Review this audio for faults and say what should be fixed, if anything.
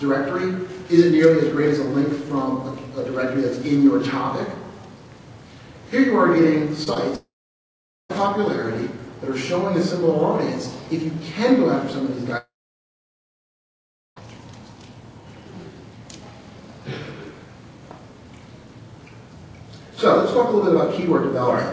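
Short concealed packet loss at 6.84 to 6.88 s and 6.94 to 6.97 s: about 20 ms of audio failed to arrive each time. The decoder extended the preceding sound from its pitch or as shaped noise, then crossfaded back, leaving two brief smears. A deeper jitter buffer with forward error correction would let these packets be recovered before playback.

Long network dropout at 7.15 to 8.11 s and 12.37 to 14.18 s: the sound continues briefly as a fading buzz or hiss, then goes silent for about 0.8 s and 1.7 s before resuming further on, with the missing stretch never played. This points to a likely loss of the connection. A more stable network link, with redundancy for bursts of loss, would prevent these gaps.

The G.722 call path, whose cut-off above 8 kHz fits that codec at 64 kbps, is not a fault.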